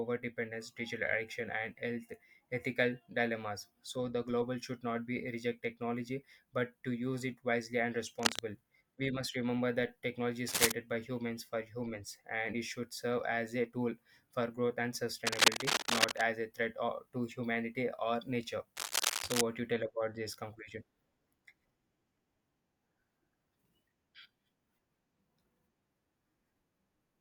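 Cable scratch noise hits this speech recording at 8.19 to 8.39 s, 10.48 to 10.72 s, 15.26 to 16.22 s and 18.76 to 19.41 s: ragged rustling bursts, the first three about 5 dB above the voice and the last roughly level with it, likely from a worn cable or connector being moved so its contact resistance flickers.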